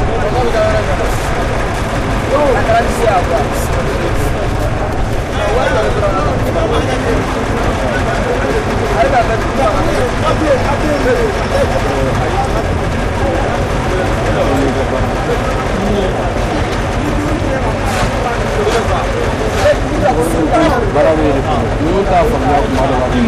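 This is a recording of everyday sounds, and the whole thing is hard clipping. It's pushed about 11 dB past what some stage in the chain could pass, so the peaks get sliced flat on roughly 4% of the samples. Those squared-off tops add harmonics way up the spectrum, which is why every loud moment carries a harsh, fizzy edge. On top of that, there are compressed frames skipped at 10.01, 11.77, 12.61 and 20.69 s. At each point the audio jumps forward, losing roughly 400, 300, half a second and 200 ms respectively, so roughly 4, 3, 7 and 2 frames' worth, which fits a codec frame of about 92.9 ms.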